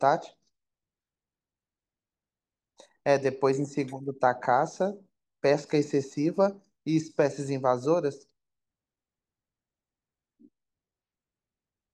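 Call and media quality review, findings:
No audible faults found in this speech recording.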